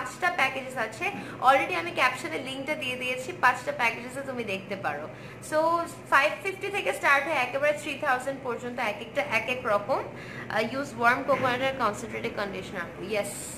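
Nothing in the audio stood out as a technical problem on listening.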